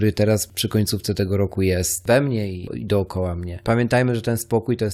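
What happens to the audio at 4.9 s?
Nothing goes wrong at 4.9 s; the speech runs intact there, with no dropout, click or distortion.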